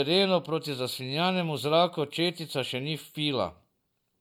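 Nothing stood out on listening to the speech here; no technical faults were heard at any point.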